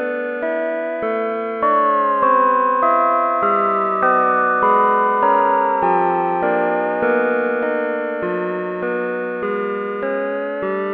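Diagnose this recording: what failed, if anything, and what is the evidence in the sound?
Nothing failed; no stage shows a fault.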